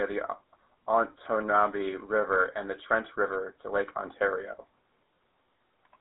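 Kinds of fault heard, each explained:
GSM full-rate codec: The speech has passed through the old GSM full-rate phone codec, which fits 13 kbps. It rebuilds the voice from a vocal-tract model driven by coarse pulses. The result is a plainly audible buzzy, gravelly roughness. Only a narrow telephone band remains, roughly 250 Hz to 3.7 kHz.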